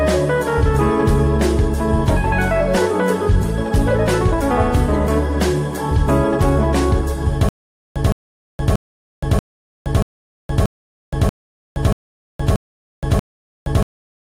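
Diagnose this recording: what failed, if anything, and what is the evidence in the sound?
From 7.49 s to the end there's a stutter with silent gaps: a 164 ms burst repeats ten times, each followed by about 470 ms of dead digital silence, a steady 634 ms cycle. Likely a stalled playback stream replaying its last fragment on each retry, losing everything in between.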